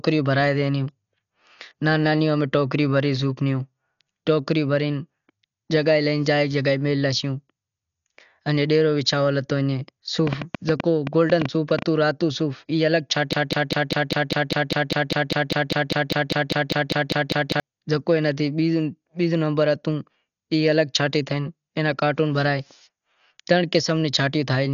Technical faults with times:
0.00-24.73 Dolby Digital compression
10.27-11.83 train of clicks
13.33-17.60 broken-record loop

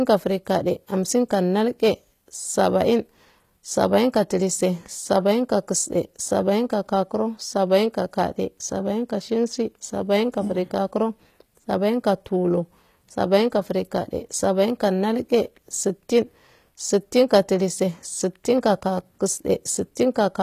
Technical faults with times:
0.00-20.43 HE-AAC compression

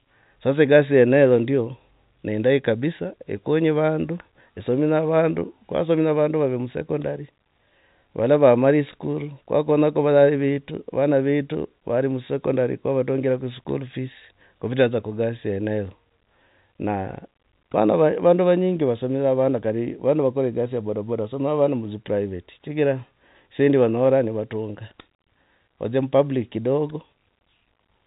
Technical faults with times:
none

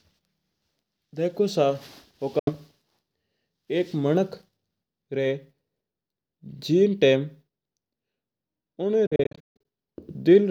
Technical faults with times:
2.39-2.51 Bluetooth dropout
9.06-9.65 Bluetooth dropout

